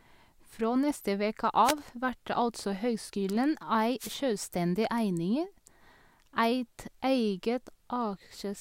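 Speech, hit twice by a wireless microphone noise hit: the analogue FM radio link fades as reflections cancel, so receiver noise surges into a short burst of static from 1.64 to 1.74 s, between "neste veke" and "vert altså høgskulen", and again from 3.99 to 4.18 s.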